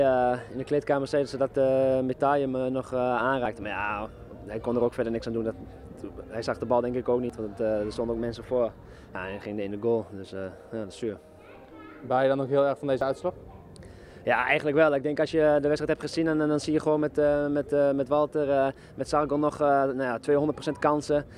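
Dropped buffers (overrun) at 3.46, 7.30, 9.15 and 13.01 s: the audio jumps ahead with no gap, losing roughly 70, 40, 70 and 20 ms, likely because samples were overwritten before being read.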